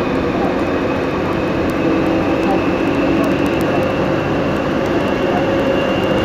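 Everyday sound carrying word clock ticks from 0.16 to 6.19 s, around seventy clicks roughly every 70 ms, as an unlocked receiver slips one sample against a clock about 300 ppm off.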